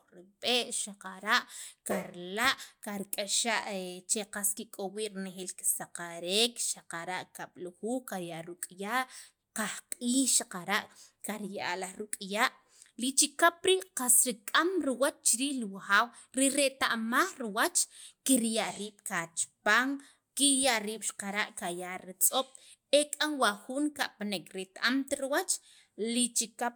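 No technical faults turn up anywhere in the speech, so there is nothing to describe in time order.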